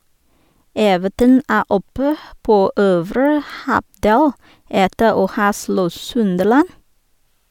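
Nothing in the speech stood out as a technical problem on listening.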